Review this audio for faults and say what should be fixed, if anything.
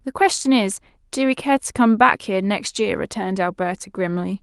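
Nothing needs fixing: the speech signal is continuous and intact throughout, with no audible technical faults.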